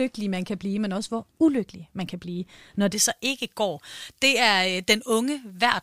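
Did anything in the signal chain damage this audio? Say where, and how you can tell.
Yes. From 2.93 s, right after "man kan blive når", to the end, pre-emphasis is left on. A treble boost, which fits a J.17-style curve, was never undone at the de-emphasis stage, so 10 kHz sits about 11 dB high relative to 1 kHz, making the speech thin, bright and sibilant.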